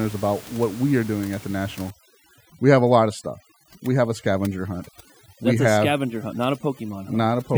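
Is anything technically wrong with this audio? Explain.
Yes. From about 1.9 s, right after "are doing at the", through to the end, there's overdone noise removal. The reduction is pushed far too hard: any frequency band that lands near its noise estimate gets pulled way down or dropped entirely, and the quieter bits of the speech get caught with it. The room noise, sitting about 22 dB under the speech, drops and breaks up into little twinkling specks.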